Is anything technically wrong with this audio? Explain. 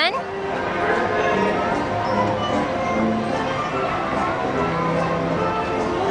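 No, nothing technically wrong turns up on listening; there are no audible faults anywhere in the recording.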